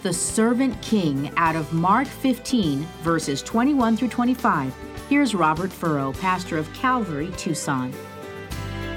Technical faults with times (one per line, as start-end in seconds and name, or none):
none